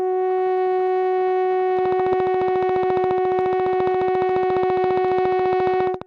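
A train of clicks runs through this music from 1.79 s to 6.03 s: about seventy evenly spaced ticks at 14.4 per second, peaking roughly 10 dB above the music. The likely cause is interference or a faulty connection or power supply. A spectrogram would show regular thin vertical broadband lines, and a waveform would show matching spikes.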